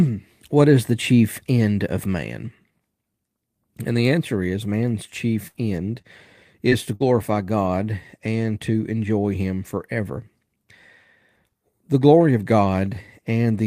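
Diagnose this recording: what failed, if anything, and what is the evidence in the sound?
Network packet loss in the speech stream. A burst of packet loss right after "the answer is man's", at 5.47 to 5.61 s, and again at 6.95 to 7.05 s: roughly 60 ms and 40 ms of audio never arrived. The decoder extended the last sound for about 70 ms and 50 ms, decaying it. On a spectrogram this shows as a smeared, fading continuation, then an abrupt resumption.

Short concealed packet loss at 6.02 to 6.06 s and 6.70 to 6.73 s, each a single 20 ms gap patched with synthesised continuation. It is heard as a brief smear or wobble. In the waveform it appears as a short synthesised stretch blending back into the real signal.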